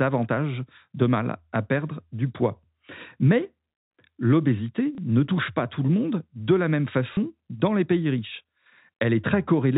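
At 4.95 s, and again at 7.14 s between "monde de la même" and "dans les pays riches", the telephone-band audio briefly blips from packet loss with the last packet repeated. About 30 ms goes missing each time, which fits a single lost 30 ms packet, and the receiver replays the previous chunk instead. The replay ignores the pitch cycle. Unlike a silent dropout, the gap is filled with a short mechanical repeat rather than a hole.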